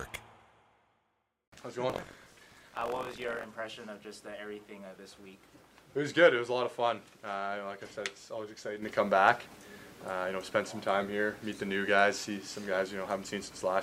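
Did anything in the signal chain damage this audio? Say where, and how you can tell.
Yes. The damage is at the driver or buffer stage, from 1.88 to 3.45 s. There the sound picks up a rattling, robotic buzz at 46.9 Hz. That rate fits a 1024-sample buffer. This is buffer tearing. The writing program and the hardware reading the ring buffer have slipped out of step. In each period, about a tenth of the buffer replays audio from roughly 100 ms earlier. Hard joins on either side of that slice produce the buzz.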